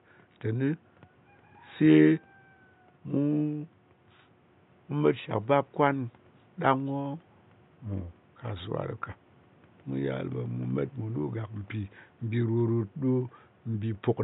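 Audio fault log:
No faults heard.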